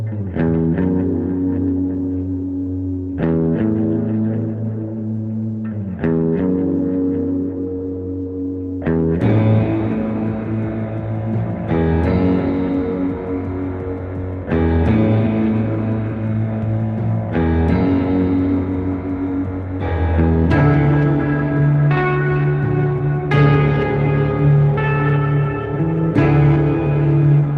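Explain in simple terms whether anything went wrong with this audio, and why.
Nothing went wrong: the audio passed through an ordinary internet-call connection, with its usual compression and buffering, and nothing in it points to a fault.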